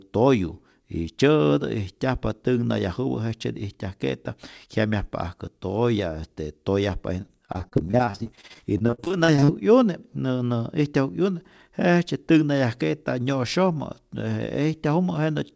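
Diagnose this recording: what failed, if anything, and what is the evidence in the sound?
Repeated packet loss (robotic sound), 7.22 to 9.50 s: network drops leave dozens of gaps up to 42 ms, and concealment repeats earlier sound, making the speech choppy and robotic.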